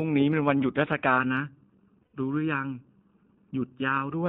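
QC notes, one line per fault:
throughout, iLBC codec. The sound is confined to a narrow telephone band, about 150 Hz to 3.7 kHz, with nothing above. Each 20 ms frame is coded on its own, which fits the 15.2 kbps mode. Plainly audible coding damage makes the speech rough and slightly synthetic.
1.18–4.11 s, channel delay (comb filtering). One channel lags the other by under a millisecond, and the two are summed to mono. Shared content cancels at evenly spaced frequencies, starting near 700 Hz. The speech turns hollow and phasey, with fixed notches.
2.02–2.16 s, lost iLBC frames. About 120 ms of audio is missing, which fits six 20 ms frames. The decoder repeats the last pitch cycle mixed with noise. This gives a held, slightly buzzy vowel. Because frames stand alone, normal decoding returns almost immediately afterwards.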